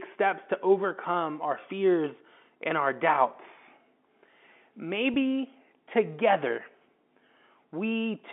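Speech over a G.711 telephone line, band-limited to roughly 200 Hz to 3.5 kHz. At 5.14 to 5.16 s there is packet loss with pitch repetition. A gap of about 20 ms, consistent with a single dropped packet, was filled by repeating the last pitch period. This leaves a brief held, slightly buzzy moment before the speech resumes.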